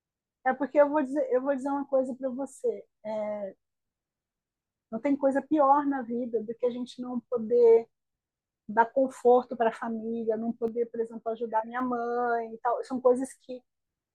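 A speech recording with a sudden gain jump from 10.68 s to 11.8 s: speech and background noise drop together by about 5 dB in a single step, then return. The likely cause is a digital gain setting applied instantly, with no ramp between samples.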